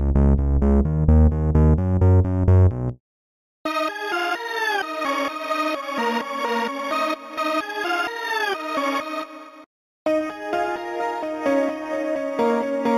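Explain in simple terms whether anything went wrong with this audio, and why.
Something did go wrong, and it lasts the whole clip, from start to end at about 13 seconds. The fault is imaging from linear upsampling. The sound began at a low rate, 8000 samples per second, and was raised to 48000. The gaps were filled by joining samples with straight lines. That filters poorly. Real detail stops near 4 kHz, so the top sounds dull. A fainter mirrored copy sits between 4 and 8 kHz, adding a metallic shimmer to hissy sounds.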